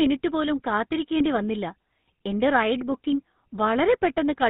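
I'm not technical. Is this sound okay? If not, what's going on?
No. For the whole clip, the speech has been squeezed through the GSM full-rate codec, the old compression standard used for early mobile phone calls. It rebuilds the voice from a simple model of the throat and mouth, driven by a coarse pulse pattern, which gives the plainly audible buzzy, gravelly roughness here. It also cuts off everything above 4 kHz, so the sound is dull and boxy, without the crisp edges on consonants.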